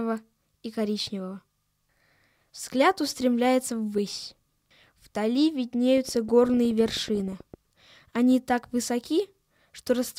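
A train of clicks runs from 5.97 to 7.55 s, likely from a faulty connection or nearby interference injecting pulses. Around twenty similar clicks arrive unevenly at about 13.4 per second, popping over the sound at roughly its own level.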